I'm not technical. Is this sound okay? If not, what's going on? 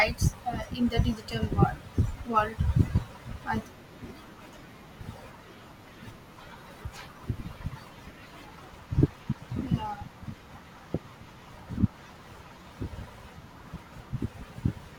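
No. At 4.53 s the speech skips: a tiny slice, roughly four hundredths of a second, is gone, and the sound on either side is butted together. This is audio missing between chunks, likely from the recording being handled in six-second pieces. Unlike a dropout, no silent gap is left behind.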